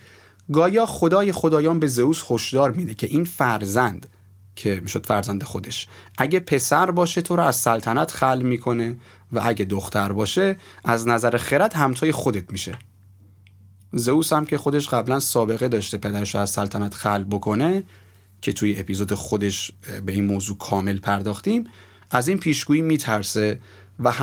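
Right from the start there's clock drift between sender and receiver: the sender's clock runs about 4 percent fast, so the receiver's jitter buffer keeps filling up and it has to throw bits away to avoid falling behind. You hear that as a faint, nagging unsteadiness across the whole speech clip.

Those repeated timing corrections run from 0.05 s to 23.98 s, all in the same direction, trimming short slivers so playback effectively keeps pace at 104 percent speed. Each cut is tiny, but they land at uneven spacing, giving small hiccups and a slightly lurching rhythm.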